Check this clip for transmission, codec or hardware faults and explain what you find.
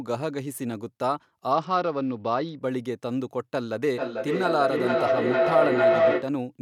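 Two faults are present in this speech clip.

From 1.51 to 2.61 s, a Bluetooth SBC bit pool drop starves the upper sub-bands, so treble dulls and gritty noise rises, consistent with the bit pool falling from 31 to about 9, near 72 kbps.

From 3.88 to 6.41 s, a feedback howl builds as a mic-to-speaker loop gains level each pass, producing a tone around 700 Hz, pulsing roughly every 0.4 s, peaking about 6 dB above the speech.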